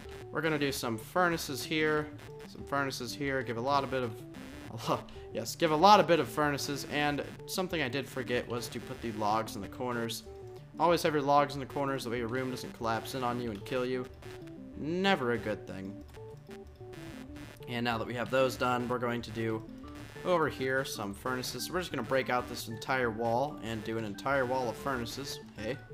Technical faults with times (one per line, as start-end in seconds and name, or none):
0.00-25.94 computer activity noise